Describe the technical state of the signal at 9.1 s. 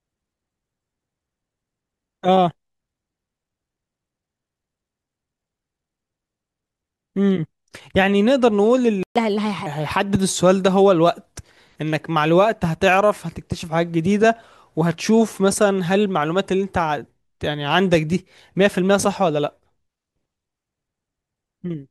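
At 9.1 s the speech is in a playback stall: from 9.03 to 9.16 s the output goes silent for about 126 ms, most likely because the player ran out of data.

Immediately after, from 9.16 to 9.66 s, comes catch-up at higher speed: the player resamples its backlog at 1.25 times normal rate, so tempo and pitch rise together by about four semitones, then both return to normal. A plain pitch shift would leave the timing unchanged.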